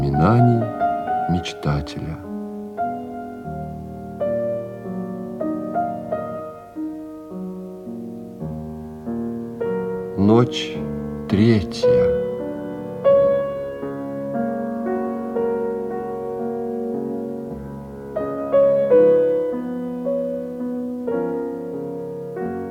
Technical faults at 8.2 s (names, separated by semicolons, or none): none